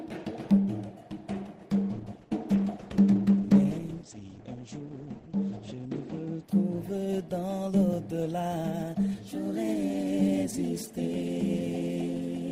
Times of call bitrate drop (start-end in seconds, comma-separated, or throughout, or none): 1.73-7.31